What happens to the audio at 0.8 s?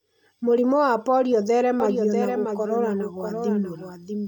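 Nothing goes wrong at 0.8 s; the speech carries on intact through that moment with no dropout, click or distortion.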